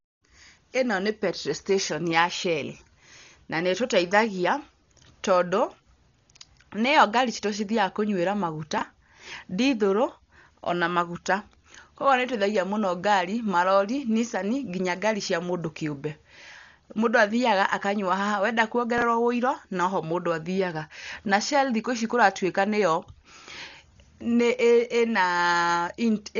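From start to end, the speech is band-limited, with nothing above 6.9 kHz, and sounds dull, with a rough, fluttering noise clinging to voiced sounds. This is likely Dolby Digital compression at a very low rate, consistent with around 40 kbps. The encoder narrows the band and leaves many frequency lines without bits, so the decoder fills them with noise. On a spectrogram there is a flat ceiling at 6.9 kHz and speckled, grainy texture between harmonics.

At 8.78 to 8.82 s, chunks out of order produce a brief garbled stutter. A 10 ms piece of audio plays after the pieces that should follow it, which fits it arriving about three chunks late. Nothing is missing, but the sequence is scrambled with three hard joins. The waveform shows abrupt discontinuities at the seams, and the spectrogram shows thin vertical broadband lines there.

At 18.98 to 19.02 s, just after "athiaga akanyua haha wenda", the same out-of-order fault recurs. 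Again a 10 ms section is displaced by roughly three chunks, giving a short jumbled moment. It looks like the first one: sharp steps in the waveform and narrow vertical streaks across the spectrogram.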